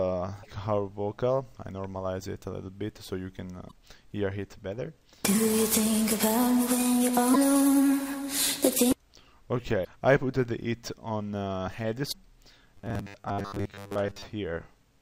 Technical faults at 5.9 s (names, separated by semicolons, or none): none